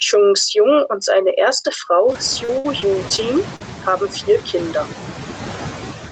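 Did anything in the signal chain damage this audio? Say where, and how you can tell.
Yes. Throughout the clip, the residual background sinks and swells with the talker, dropping between phrases and creeping back underneath them. These are noise suppressor artifacts from the call-processing stage. The suppressor estimates steady noise and pulls those bands down frame by frame, here by about 6 dB. The room noise rises by about 21 dB near 2 s, so the suppressor has more to remove, which makes its gating audible.

From 1.51 s to 3.62 s the speech turns choppy, with small pieces missing. This is repeated packet loss, giving a robotic sound, and it comes from the network stage. Eight separate gaps fall in that span, the longest about 60 ms, totalling about 240 ms of missing audio. The receiver's concealment stretches the last decoded sound into each hole, and the next loss arrives before the voice fully recovers. 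Around a third of a second of that stretch is rebuilt rather than real. The Opus call path, with nothing above 8 kHz, carries this concealment.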